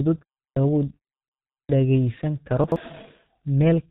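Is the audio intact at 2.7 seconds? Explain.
No, not at 2.7 s. Between 2.64 and 2.76 s there's a chunks-out-of-order glitch. A 40 ms piece of audio got played two chunks late, after the pieces that should have followed it. Nothing is actually missing, but the sequence is scrambled, so you get a brief jumbled moment where the mismatched pieces butt up against each other at the hard joins.

That moment also carries the heavy G.723.1 codec damage that runs through the whole clip. The speech sounds muffled and hoarse, with nothing above 4 kHz and smeared consonants. The coarseness fits a bitrate of around 6 kbit/s, with 30 ms frames and a slow-moving voice model.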